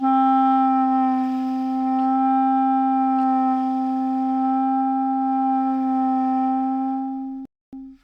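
Near the end, from 7.45 to 7.73 s, the sound cuts out to silence for 0.27 s and then carries on. That's most likely a Bluetooth stall: interference held up packets, the headphones' buffer ran dry, and playback sat waiting for the resent data.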